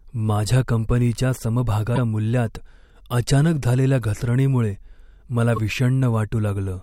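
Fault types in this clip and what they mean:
Damaged data in a compressed stream: corrupt bytes in the encoded speech make the decoder misread frames and lose sync while it searches for the next valid header. It sounds like two brief glitches, at 1.92–1.98 s and 5.56–5.58 s. On a spectrogram, each appears as a narrow vertical disruption that breaks the harmonic bands. On the waveform, it shows as a short disturbance that does not follow the surrounding envelope.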